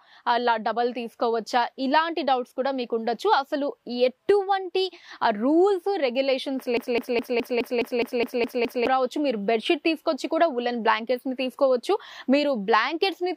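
A broken-record loop runs from 6.77 to 8.87 s: a 0.21 s fragment of the audio repeats exactly, back to back, ten times, and whatever should have played there is gone. The likely cause is a stalled player, encoder or stream re-sending its last held fragment.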